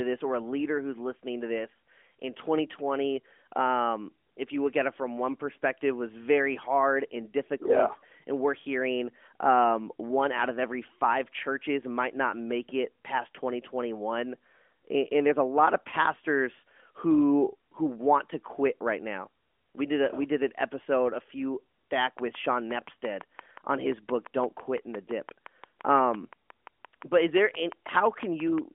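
From 22.01 s to 28.59 s, just after "an episode a few", a steady ticking of about 40 clicks at 5.8 per second rides over the narrowband phone-line speech, peaking a few decibels above it. This train of clicks is likely interference or a faulty connection injecting similar pulses.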